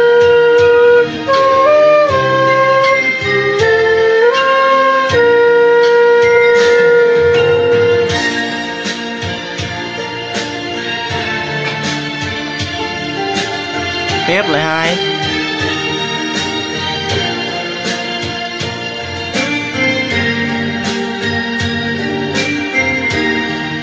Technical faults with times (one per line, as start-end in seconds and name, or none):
none